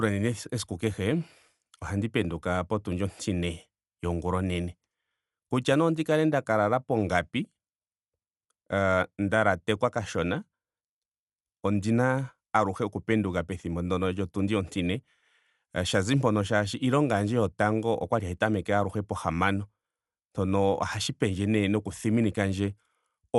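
From start to finish, the speech sounds dull and coarse. Nothing is heard above about 11.5 kHz, so the top of the band is simply missing. The damage is plainly audible. A rough, fluttering noise clings to tonal parts of the sound. This is likely Dolby Digital compression at a low bitrate, which fits roughly 64 kbps. Short of bits, the encoder cut the bandwidth. Many frequency lines lost their detail, and the decoder replaced them with noise.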